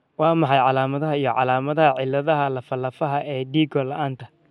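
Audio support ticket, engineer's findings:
Listened through the speech recording and nothing jumped out, so no faults to log on this one.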